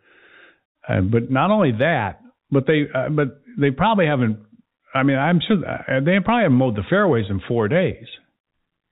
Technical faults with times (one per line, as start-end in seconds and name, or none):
none